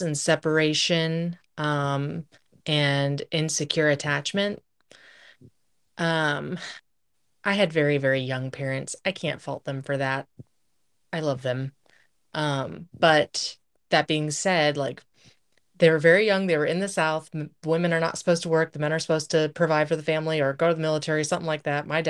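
No technical faults are audible.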